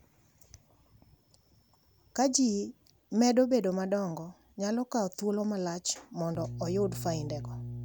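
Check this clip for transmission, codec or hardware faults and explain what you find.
One fault appears, mains hum, from 6.35 s to the end, right after "nyalo kawo thuolo malach". A steady 60 Hz tone, roughly 10 dB below the speech, leaks in from the power line. Unlike rumble, it holds one fixed pitch.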